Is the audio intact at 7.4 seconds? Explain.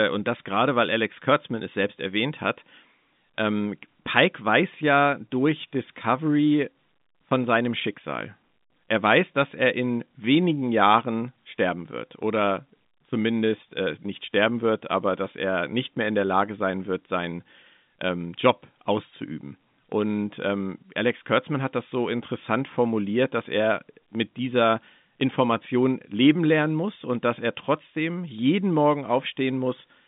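Yes, the audio is intact at 7.4 seconds: the speech passes through the ordinary G.711 telephone band there with no fault.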